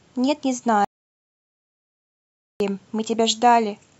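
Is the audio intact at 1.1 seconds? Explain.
No. At 1.1 seconds the speech has cut out completely: an audio dropout to silence runs from 0.85 to 2.60 s, leaving about 1.76 s of dead digital silence with no room tone. The input was likely lost while the recorder kept writing silence.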